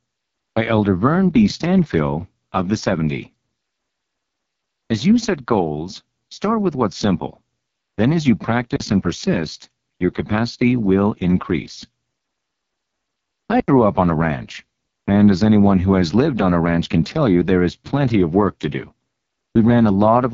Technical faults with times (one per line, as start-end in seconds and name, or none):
0.00-20.34 AMR wideband (HD Voice) codec
8.76-8.80 block of digital silence
13.60-13.68 block of digital silence